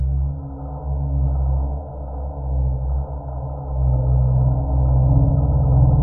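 From start to finish there's channel delay (comb filtering): one side lands around a millisecond and a half late, and folding to mono cancels shared content at evenly spaced frequencies, the first notch somewhere near 400 Hz. It leaves the sound hollow and phasey.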